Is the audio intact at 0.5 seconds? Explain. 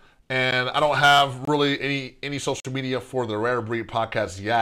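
No. At 0.51 s, just before "I don't have", a block of digital silence about 11.6 ms long replaces the speech, which fits a 512-sample buffer that was not filled in time. The abrupt cut to zero and back is heard as a brief tick.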